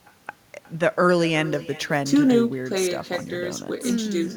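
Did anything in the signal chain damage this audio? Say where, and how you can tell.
Yes. In call processing, there is echo with no canceller throughout. Every phrase returns as a quieter, thinner copy, about 17 dB down, roughly 400 ms later. The far end's loudspeaker fed its microphone, and nothing removed that round-trip copy.

At the converter, there is sample clock jitter from 1.43 s to the end. A hiss and roughness ride on louder, brighter sounds and vanish in pauses. Timing errors of a few microseconds leave error roughly 30 dB below the signal.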